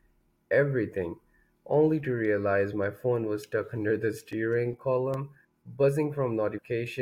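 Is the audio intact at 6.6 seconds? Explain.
No. Damaged data in a compressed stream hits at 6.57 s: corrupted bytes make the decoder misread those frames and lose sync, so it skips ahead hunting for the next valid frame header, leaving a brief chirp or blip in the speech.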